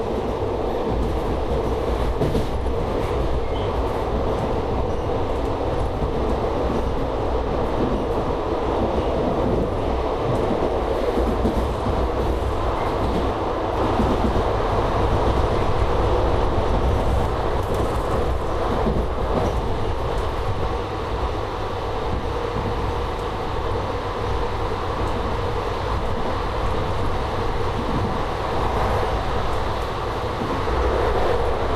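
From 13.77 to 17.25 s the sound is heard twice. A second, full-band copy trails the first by about a third of a second. It is about as loud as the original. It carries no decay and no added room colour. It cuts in and drops out abruptly at those edges. This is a doubled audio track. The likely cause is the same signal being picked up again through a slower path, or an edit leaving two copies out of step.

At 20.58 to 20.64 s there is a brief burst of DAB burbling. Weak reception let bit errors slip past the error correction into the MP2 data. Corrupted samples put short blips of noise into single sub-bands. The burst hit about a dozen frames.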